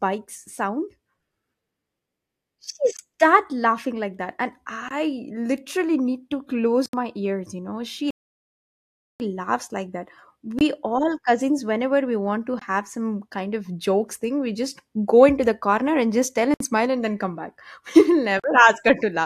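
Blocks of digital silence at 2.97, 4.89 and 6.86 s: the output buffer was likely not filled in time, so the speech drops to zeros and back with no fade, leaving holes of 21, 21 and 76 ms. The 21 ms gaps fit a 1024-sample buffer.

A rebuffering stall from 8.1 to 9.2 s: the player ran out of downloaded audio. The sound halts in silence, then resumes exactly where it stopped, adding about 1.1 s.

More blocks of digital silence follow at 10.59 and 12.59 s (21 ms each), 16.54 s (64 ms) and 18.40 s (43 ms, which fits two such buffers). Each is heard as a short hole.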